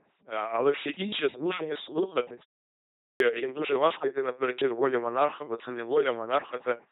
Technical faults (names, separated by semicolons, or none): LPC-10 vocoder; clipped start after a pause